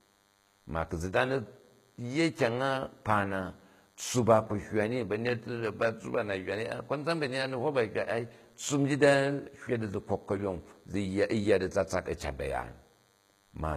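DECT cordless phone buzz runs through the whole speech recording: a thin, steady buzz at 100 Hz with a dense stack of harmonics, sitting faint, roughly 40 dB below the voice. A nearby handset or base station pulses radio every 10 ms, and the audio circuitry rectifies those pulses.

HE-AAC compression is the likely cause of the plainly audible codec damage heard throughout. Nothing remains above 14.9 kHz, and the treble is rebuilt from copied lower bands, so sibilants sound gritty and lispy. The damage fits a low bitrate of around 20 kbps.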